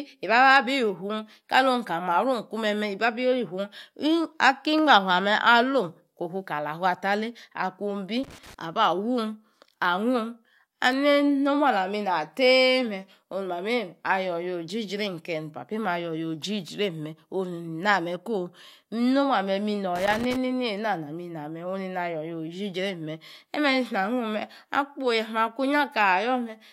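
At 8.24 s the speech breaks into a burst of loose connector crackle. It lasts until 8.54 s. A worn or dirty contact is making and breaking rapidly as it shifts. The signal is chopped into fragments, giving an irregular scratching sound over the voice. The same fault returns from 19.96 s to 20.36 s. This second burst runs slightly longer, about 0.4 s, with the same harsh, uneven crackle.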